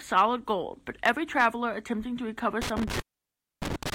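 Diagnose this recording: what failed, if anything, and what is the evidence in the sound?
Hard clipping at the converter or an analogue gain stage ahead of it: peaks are sliced flat briefly at 0.17–0.21 s, then for longer at 1.06–1.46 s. The first overload runs about 2 dB past full scale, heard as a quick crackle. The second, about 4 dB over, gives crackle on the peaks across that stretch. Soft saturation rounds peaks gently, but these flat tops throw sharp harmonics high into the spectrum.

Intermittent contact in the analogue wiring, a loose plug or cable, begins at 2.62 s and continues to the end of the recording. During that stretch the line opens for about 0.62 s. The signal vanishes with crackle at the break edges and faint hiss while the circuit is open. A network or codec dropout would give clean digital silence or a smoothed gap, not this scratchy, hiss-filled break typical of a failing mechanical contact.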